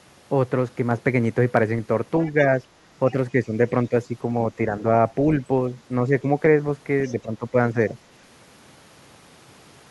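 An echo canceller likely left part of the far end's loudspeaker playback in the microphone signal, so the other side's voice leaking through appears from 2.22 to 2.45 s as a faint second voice, roughly 30 dB below the main talker.

Double talk then likely defeats the echo canceller, which turns down the near talker along with the echo. This speech suppressed in double talk shows as brief dips of a few dB at 3.32 to 3.55, 3.89 to 4.14, 4.57 to 4.82 and 6.08 to 6.27 s.

Leakage returns from 7.04 to 7.15 s, somewhat louder at about 25 dB down. Suppression overlaps it from 7.12 to 7.56 s with the deepest cut, around 15 dB. A final shallow dip follows at 7.74 to 7.94 s.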